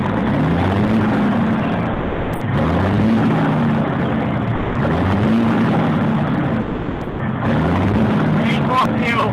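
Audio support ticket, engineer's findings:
Sound cuts out abruptly to steady low-level noise, then resumes mid-stream: 1.93–2.41 s (480 ms), 4.55–4.75 s (200 ms), 6.61–7.19 s (580 ms). Likely sound dropped by the voice detector: sender-side activity detection misread live content as background and stopped transmitting, with receiver comfort noise filling the gap until re-trigger. Pattern consistent with Opus DTX. Component: sender VAD/DTX threshold.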